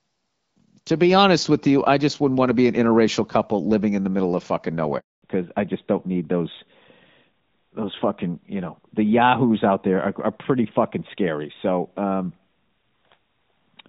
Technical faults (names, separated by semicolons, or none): handover gap; fallback to narrowband